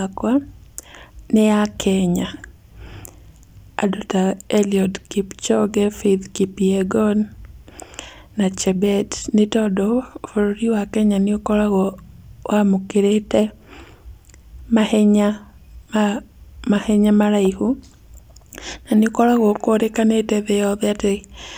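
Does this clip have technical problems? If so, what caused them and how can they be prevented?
No, nothing stood out as a technical problem on listening to this speech clip, so there is nothing to trace back or prevent.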